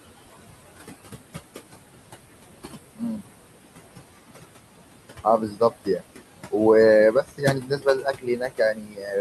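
A speech recording carries noise suppressor artifacts throughout. The room noise, sitting about 12 dB below the voice, is pulled down by about 19 dB between phrases and swells back under them. A simple gate would switch noise cleanly on and off without the warble of a suppressor. Speech cut by the noise suppressor also occurs at 2.96–3.21 s, 5.24–6.03 s and 7.12–9.15 s, with drops of about 17, 20 and 21 dB. Soft sounds and endings fade into the background for roughly a tenth of a second, a third of a second and a full second in total. Unlike a dropout, they are turned down rather than vanishing in abrupt silent gaps.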